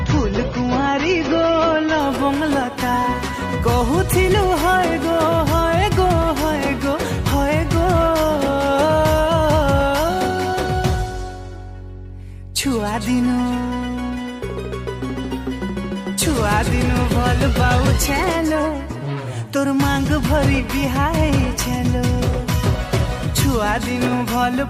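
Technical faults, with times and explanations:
0.0 to 2.0 s, adaptive stream starting at a low bitrate: the opening sounds dull and smeared, with nothing above 7 kHz and heavier coding artefacts. This fits a starting rendition near 24 kbit/s AAC-LC, which a player picks so playback begins quickly before it has measured the connection. At 2.0 s the treble returns and the artefacts ease in a sudden step with no gap, consistent with a switch to a rendition near 96 kbit/s once throughput was known.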